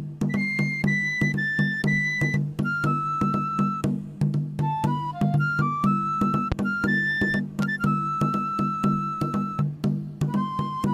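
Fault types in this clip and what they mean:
Loud pop: Two pops, at 6.52–6.54 s and 7.62–7.65 s, jump about 15 and 10 dB above the sound. Likely voltage spikes from static or a switch.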